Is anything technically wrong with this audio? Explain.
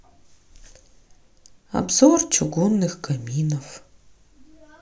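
No, nothing technical stands out here; the speech comes through without any audible fault from beginning to end.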